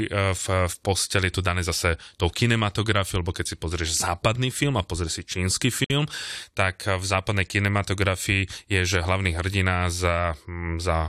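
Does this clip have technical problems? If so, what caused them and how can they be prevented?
Yes. A gap at a join of encoded pieces opens from 5.84 to 5.90 s. Untrimmed encoder delay and end padding leave a 57 ms gap before the speech resumes. Prevent it by encoding continuously or trimming encoder delay and padding at joins.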